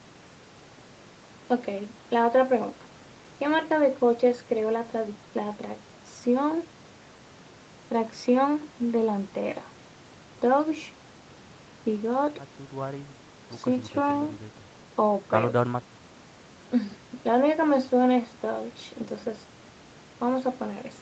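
Nothing stood out on listening to this speech, which comes through a call path whose content stops at about 8 kHz.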